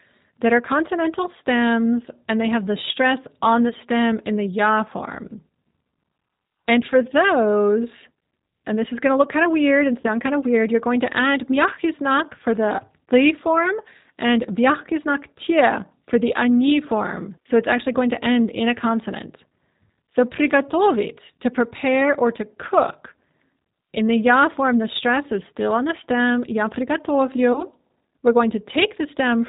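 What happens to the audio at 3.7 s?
Right after "have the stress on", from 3.69 to 3.73 s, there's VoIP packet loss concealed by the speech codec. About 20 ms went missing, which fits one dropped packet. The G.729 decoder patched it by extrapolating its last pitch and filter at falling gain, so you hear a brief buzzy or noisy, smeared blip. The voice stays weak or distorted for tens of milliseconds after, into "stem in the ya".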